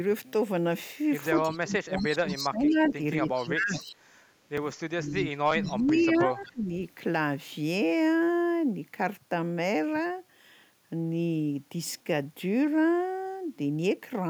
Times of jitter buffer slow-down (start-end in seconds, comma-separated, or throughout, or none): none